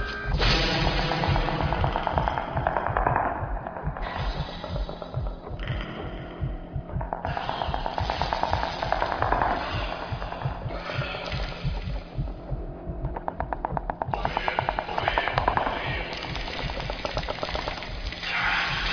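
No technical faults are audible anywhere in the recording.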